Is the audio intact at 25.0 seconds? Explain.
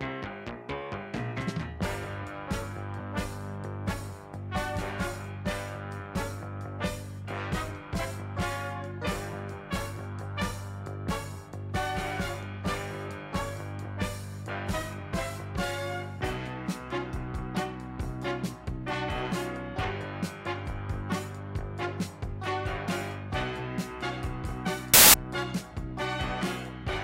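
No. At 25.0 seconds the audio falls inside a burst of samples built from the wrong bytes, running from about 24.94 to 25.14 seconds, roughly a fifth of a second. Over that span the reader assembles each sample's bytes incorrectly, so the rapidly fluctuating low-order bits end up acting as the most significant part of every value. The result is a sudden blast of loud, harsh broadband noise replacing the sound.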